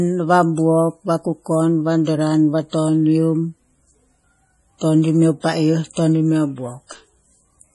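From start to finish the speech carries heavy damage that points to MP3 compression as the likely cause, at a rate that fits about 32 kbps. Nothing sounds above 11.4 kHz, and weak spectral detail flickers in and out between frames, giving a watery, swirling texture. That flicker sets it apart from a plain low-pass filter, which would dull the top end without the unstable, shifting artefacts.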